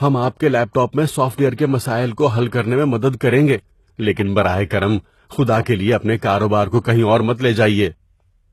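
HE-AAC compression, throughout the speech: the treble above the core band is likely rebuilt by spectral band replication rather than coded, so it sounds synthetic, with gritty, lispy sibilants. Nothing reaches past 12.3 kHz, and the plainly audible damage fits a bitrate near 16 kbps.

Pre-echo, at 5.62 to 5.66 s, just after "براہ کرم خدا" and before "کے لیے اپنے", and again at 6.19 to 6.22 s, just after "خدا کے لیے اپنے": quantisation noise sized for an attack smears into the quiet moment before it, a short hiss 44 ms and 35 ms ahead that softens each onset.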